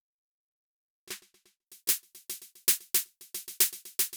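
Pre-emphasis left on affects this music clip from 1.67 s to the end. The treble boost applied before recording or transmission was never undone by the matching de-emphasis, so highs sit about 13 dB above 1 kHz at 10 kHz, which fits the 75-microsecond FM curve. The music turns thin, bright and sibilant.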